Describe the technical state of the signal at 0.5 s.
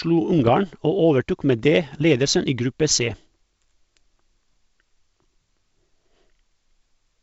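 At 0.5 s the speech is at the tail of a burst of bit errors on an ADPCM link, running from about 0.33 s to 0.50 s. Flipped bits in the coded stream throw off the decoder's step size and predictor, so each error rings on for a few milliseconds instead of staying a single-sample glitch. The result is pops and rough, gritty bursts with brief jumps in level. The error density points to a rate of a few tenths of a percent, carried over the G.722 wideband path.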